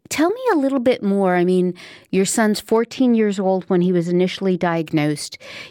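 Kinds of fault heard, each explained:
De-emphasis applied wrongly: a treble-cut stage meant to undo pre-emphasis acted on speech that had none, or was applied twice, tilting the response smoothly downward so that 10 kHz sits about 10 dB below 1 kHz. From 2.77 to 4.77 s, starting right after "I mean your son's", the speech turns dull and muffled. Consonant detail and air are dulled, then the brighter top end returns when the section ends.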